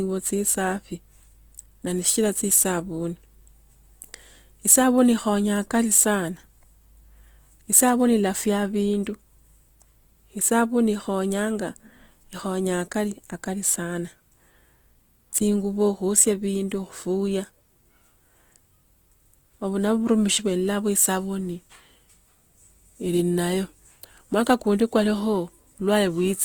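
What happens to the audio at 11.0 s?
As throughout the clip, Opus compression marks the speech at 11.0 s. Starved bands are refilled with noise or folded content, which sounds grainy and rough, likely from a CELT-mode encode near 24 kbps.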